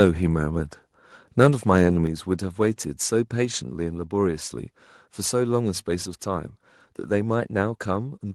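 A speech recording in which the microphone volume stepped down once, at 2.07 s, likely because the call software judged the input too hot and cut the device's input volume in a single move rather than easing it down. The result is an abrupt drop of about 4 dB: the voice and the background beneath it both become quieter at the same instant and stay at that lower level afterwards, with no gradual fade.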